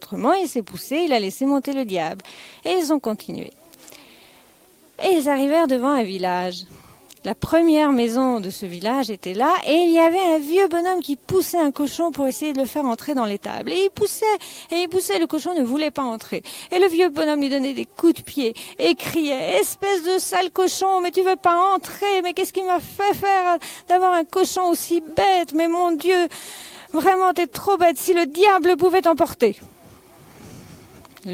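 No technical faults can be heard anywhere in the audio; the signal stays continuous and stable throughout, with no disruptions to its level, timing or frequency content.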